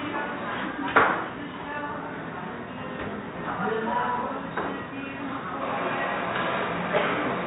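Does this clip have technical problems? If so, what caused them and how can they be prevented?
No, nothing in this recording of sounds stands out as a technical problem, so there's nothing here to trace back or guard against.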